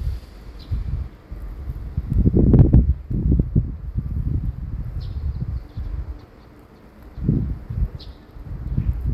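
From 2.54 to 2.75 s the loudest part of the sound hits hard clipping: the level runs about 4 dB past what the signal chain can carry, so the peaks are sliced off flat. Those squared tops throw harmonics high into the spectrum, heard as a brittle crackle riding on the peaks for that fifth of a second. The abrupt, gritty edge is what separates it from soft saturation, which rounds peaks gradually and sounds warmer.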